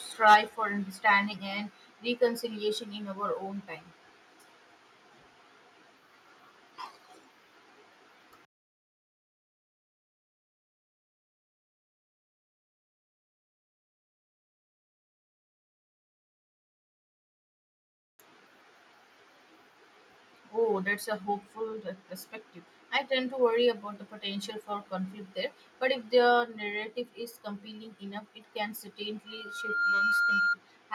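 Right at the start, from 0.27 to 0.36 s, there's microphone overload: the peaks hit the converter's ceiling and get flattened, about 5 dB past full scale, with around a tenth of the samples in that stretch squared off. You hear it as a gritty, crackly edge on the loudest bit of speech. The likely cause is the mic input gain simply being set too hot for how loudly the talker hit it.

Almost immediately, at 0.34 s, the microphone volume is stepped down by about 3 dB, so the speech and whatever's behind it drop together in one abrupt notch rather than a smooth fade. That timing, right on the heels of the clipped peak, points to the call software likely reacting to the overload by pulling the device's input level down. A second step of about 4 dB comes at 26.4 s, the same single-jump drop in the whole signal.

Then from 29.27 to 30.57 s there's a loudspeaker feedback squeal: the mic is picking up the speaker it feeds, and at 1.4 kHz the loop gain tips over one, so that tone feeds on itself. 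It swells over roughly half a second into a steady whistle sitting about 5 dB above the speech, and it lasts about 1.3 s in all before it stops.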